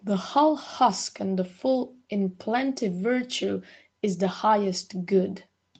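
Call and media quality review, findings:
No faults found; the speech passes through normal call microphone processing and the Opus call path, with content topping out around 8 kHz as expected for a wideband call.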